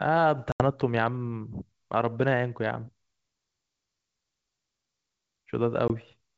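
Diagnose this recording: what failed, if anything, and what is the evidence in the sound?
Network stage: packet loss on an ADPCM call, in the G.722 stream. There's a hard-edged silent hole at 0.52–0.63 s (about 80 ms, a few packets) and a 20 ms one at 5.88–5.91 s. The decoder's predictor loses sync, so the sound returns slightly distorted before settling.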